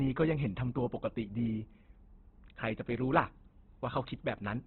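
A de-emphasis treble cut was applied wrongly to this speech from 0.0 to 2.96 s, sloping the response down by about 14 dB at 10 kHz relative to 1 kHz, so that opening stretch sounds dull and muffled. Throughout, the audio stops dead above 4.3 kHz and carries heavy rough, grainy damage, likely from Opus compression in its CELT mode at narrowband, which fits a bitrate around 12 kbps.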